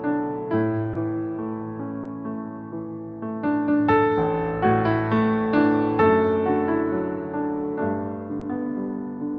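At 0.93, 2.03 and 8.39 s there's a short concealed packet loss. About 20 ms of audio didn't arrive in time, and the receiver papered over it by stretching out the preceding sound before blending back in. Each gap comes through as a quick smear or wobble over the call path's roughly 8 kHz top end.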